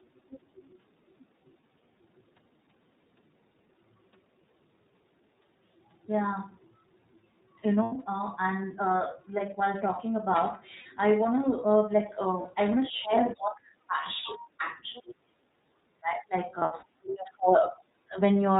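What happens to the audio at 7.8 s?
From 7.83 to 7.93 s there are lost iLBC frames. The decoder fills a gap of roughly 90 ms, which fits three missing 30 ms frames, by repeating the last pitch cycle blended with noise. It sounds like a briefly held, slightly buzzy vowel, and normal coding resumes almost immediately because each frame decodes independently.

The surrounding audio carries the iLBC codec's plainly audible damage. This narrowband coder, running at 13.33 kbps with 30 ms frames, removes everything above 4 kHz, leaving the speech band-limited, somewhat rough and faintly synthetic.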